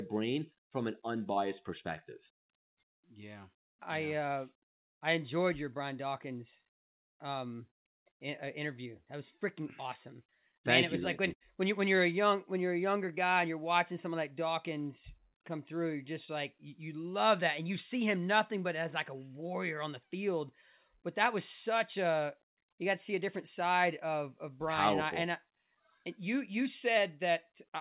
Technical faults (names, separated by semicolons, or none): short concealed packet loss; burst of packet loss